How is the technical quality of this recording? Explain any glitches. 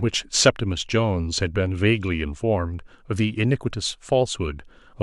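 Nothing in the recording stood out as a technical problem on listening, so there are no glitches to explain.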